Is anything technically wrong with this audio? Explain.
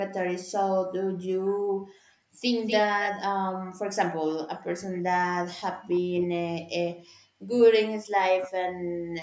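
Yes. The speech has three kinds of echo-canceller fault.

Background gated by the echo canceller, 1.04–2.43 s and 6.95–7.53 s: the canceller pulled the microphone down by about 40 dB while the loudspeaker played, so the room sound drops out and then returns.

Echo leak, at 2.66–3.11, 4.95–5.02, 5.37–5.42 and 5.97–6.22 s: a copy of the far-end speech arrives 248 ms late, from nearly speech level down to faint. This is likely residual loudspeaker pickup the canceller failed to remove.

Speech suppressed in double talk, 3.07–6.41 s and 7.94–8.87 s: the talker's speech dips deeply while the other side speaks, likely because the canceller attenuated both signals during overlap.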